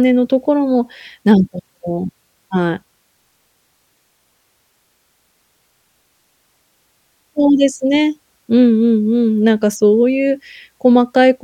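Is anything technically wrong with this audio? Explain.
No technical faults detected.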